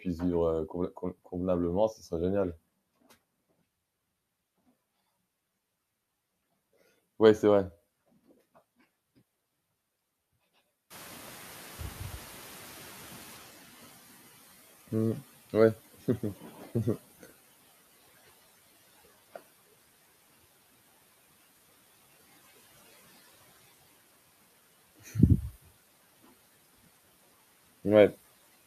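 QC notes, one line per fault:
10.9–17.06 s, noise suppressor catching up: room noise jumps about 18 dB near 11 s. The suppressor's noise estimate lags, so the noise first passes through with less reduction, then sinks by about 14 dB over 6.16 s.
16.41–16.67 s and 24.99–25.15 s, speech cut by the noise suppressor: parts of the speech are mistaken for noise and pulled down by up to about 9 dB and about 12 dB. For roughly a few tenths of a second in total, the speech sounds swallowed and faint.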